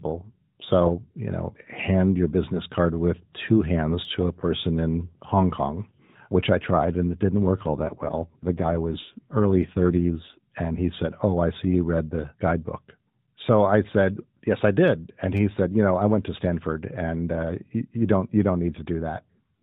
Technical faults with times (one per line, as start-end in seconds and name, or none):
4.05 repeated buffer
7.63-10.45 AMR rate drop
15.37-15.39 repeated buffer